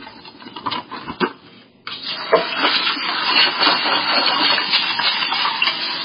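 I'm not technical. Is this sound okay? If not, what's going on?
No. From start to finish the sound is dull and muffled, as if heard through a blanket, because everything above about 5 kHz is missing. What remains has a watery, swirling quality, with blurred sharp edges. The likely cause is heavy MP3 compression. With too little data to work with, the encoder removed the treble entirely and dropped quieter detail that keeps flickering in and out.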